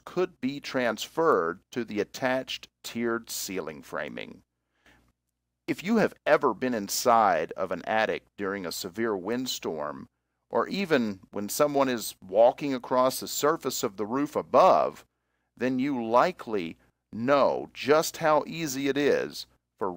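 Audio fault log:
No fault to log for this audio.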